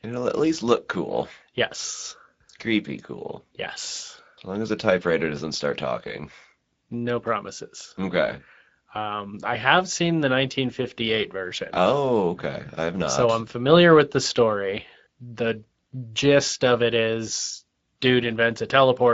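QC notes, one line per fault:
Throughout: Speex codec. The speech sounds hoarse and grainy, with a noisy roughness on every syllable. This CELP coder models the voice with a small excitation budget, so fine detail in the source signal is lost. The damage is plainly audible and fits a mid-range setting near 16.8 kbps. Nothing remains above 7.7 kHz. The upper band sounds like a shaped noise fill rather than real detail, which adds a hissy, synthetic edge.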